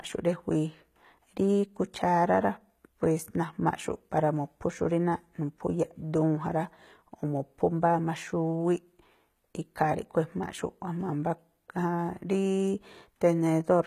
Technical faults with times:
0.00-13.86 HE-AAC compression

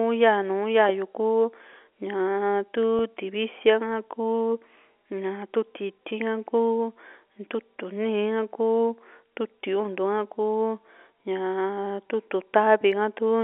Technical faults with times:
2.99 packet loss with pitch repetition
6.09-6.11 packet loss with pitch repetition

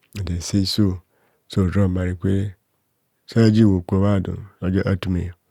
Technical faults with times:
0.12-5.49 clock slip clicks

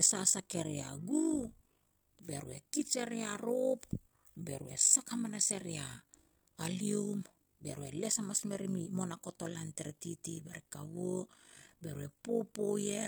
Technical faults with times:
0.00-13.08 overlap-add ripple

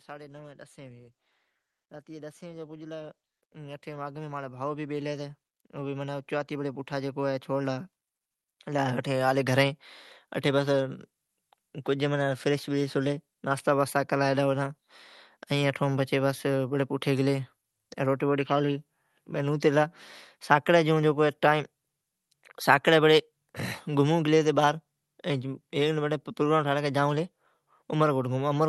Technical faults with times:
0.07-9.65 automatic gain rising

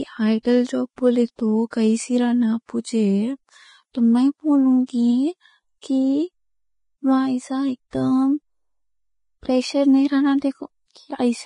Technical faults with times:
0.00-11.46 low-bitrate audio saved at a high bitrate

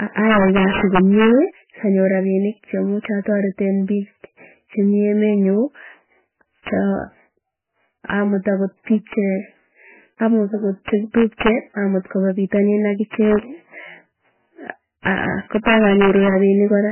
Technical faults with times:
0.00-16.91 integer overflow
0.00-16.91 MP3 compression

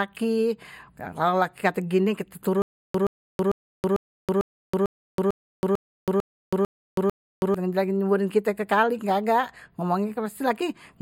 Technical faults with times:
2.62-7.54 stutter with silent gaps

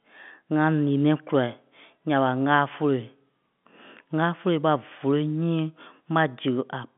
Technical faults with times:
none

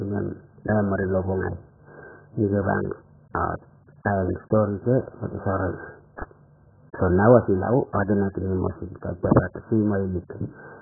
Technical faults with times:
0.00-10.81 AAC compression

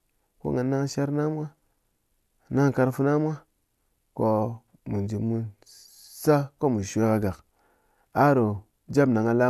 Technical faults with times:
none

